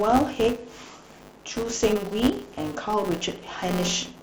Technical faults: filter restarted on every block

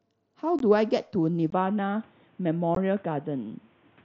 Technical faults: unconcealed Bluetooth headset packet loss; input switched to a poorer device

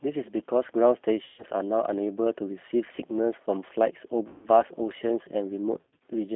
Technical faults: G.729 codec; VoIP packet loss concealed by the speech codec

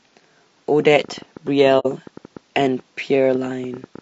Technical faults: low-delay AAC compression; train of clicks; AAC frame loss with muting

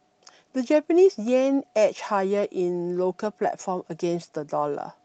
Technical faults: none

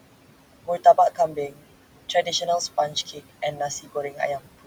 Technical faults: noise suppressor artifacts; speech cut by the noise suppressor

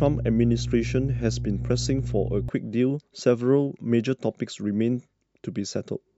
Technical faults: mains hum

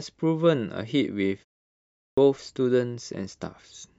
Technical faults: clipped start after a pause

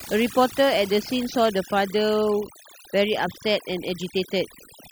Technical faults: overdone noise removal

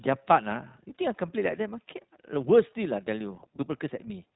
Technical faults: iLBC codec

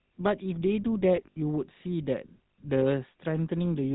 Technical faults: GSM full-rate codec; lost GSM frames

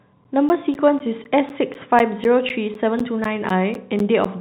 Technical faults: periodic USB or driver dropouts

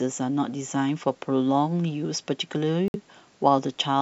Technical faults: Bluetooth stall

